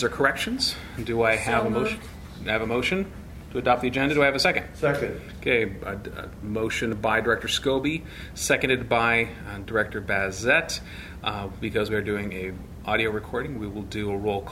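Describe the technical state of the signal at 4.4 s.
At 4.45 s the sound jumps forward, with roughly 20 ms missing and no silence left, which points to audio missing between chunks, likely at a 2.5 s chunk boundary, unlike a dropout's gap.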